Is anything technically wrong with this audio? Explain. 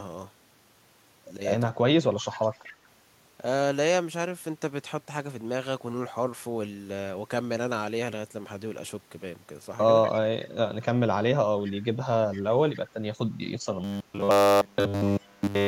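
Yes, there are three kinds of fault in this speech clip.

Speech suppressed in double talk occurs from 1.73 to 1.95 s, most likely because both ends of the call were talking at once. The echo canceller could not tell the near talker apart from the loudspeaker echo it was trying to remove, so it turned everything down. The speech dips by as much as about 20 dB, and the gaps add up to around 150 ms across that stretch.

Echo leak appears at 2.32 to 2.74 s, 10.03 to 10.17 s, 11.65 to 11.72 s, 12.32 to 12.42 s, 12.75 to 12.79 s and 15.06 to 15.28 s. The far side was likely on a loudspeaker, and its canceller let part of what its microphone picked up travel back. Each time, a faint copy of the speech trails the original by 240 ms. It sits about 15 to 25 dB below the direct sound, strongest at 10.03 s.

Robotic sound from repeated short buffers runs from 13.84 s to the end of the clip. Audio was likely arriving too rarely, and the receiver filled the gaps by looping the last short chunk in place of new audio. 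Here essentially all of the sound is made of repeats. The loop imposes a rigid 100 Hz buzz, which fits a 10 ms buffer. The speech keeps its rough outline but becomes metallic and droning.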